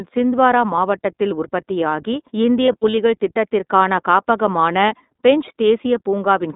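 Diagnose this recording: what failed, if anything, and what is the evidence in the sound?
Codec stage: the iLBC codec confines the speech to about 200 Hz–3.7 kHz and adds a plainly rough, synthetic texture, unlike clean telephone band-limiting, which stays smooth.

Network stage: lost iLBC frames at 0.76 s and 2.66–2.98 s, just before "திட்டத்திற்கான காப்பகமான பென்ச்", become short buzzy held vowels rather than silent dropouts, recovering instantly because each 20 ms frame decodes independently.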